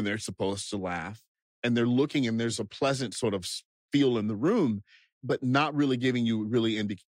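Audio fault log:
Nothing faulty can be heard in this speech recording. There is no event here to log.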